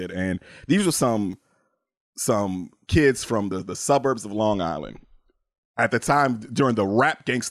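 At 1.33 s, just after "these were", new audio failed to reach the playback device in time, so it played its last buffer a second time: a repeated buffer. The duplicated stretch lasts about 2.67 ms, which fits a 128-sample buffer, and roughly 3 ms of the speech is pushed aside. Because the repeat is so short and joins hard at both edges, it comes across as a click or brief buzz rather than a stutter.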